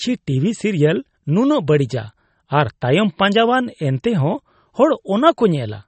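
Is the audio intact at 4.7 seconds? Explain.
No. Throughout the speech, including 4.7 s, the sound is watery and dull, likely from MP3 compression at a low bitrate around 32 kbps. Short of bits, the encoder zeroes weak frequency lines and cuts the treble above a fixed frequency, so a spectrogram shows a flat ceiling with nothing above 8.4 kHz.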